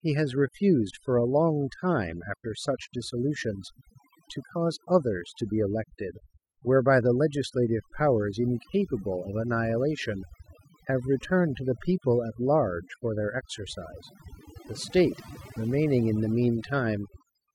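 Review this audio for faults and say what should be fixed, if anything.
Overdone noise removal runs through the whole clip. The denoiser is clamping individual frequency bands whenever they sit near its noise estimate, so the background drops and breaks up into twinkly specks, and softer parts of the speech get eaten. Back the reduction amount off and set the noise profile from a clean stretch of room tone so it only trims the noise.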